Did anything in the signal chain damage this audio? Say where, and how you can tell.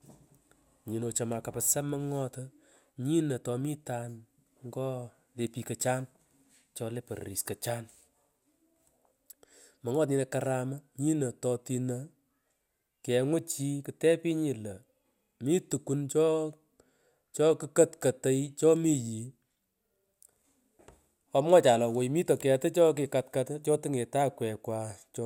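No, nothing in this speech recording points to damage at any stage of the chain. I can't hear any event or change that would tie a problem to wiring, conversion, processing, transmission, storage or playback.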